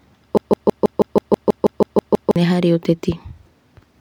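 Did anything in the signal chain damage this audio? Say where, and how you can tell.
Yes. Something between the decoder and the output, most likely a stalled playback or streaming buffer, stopped receiving fresh data and kept replaying the last fragment it held, producing a broken-record loop. From 0.37 s to 2.36 s the speech is replaced by a fragment about 0.16 s long, repeated exactly and back to back twelve times. Each repeat is identical, which points to reused buffer contents rather than a real stutter. The speech that should have filled those two seconds is missing.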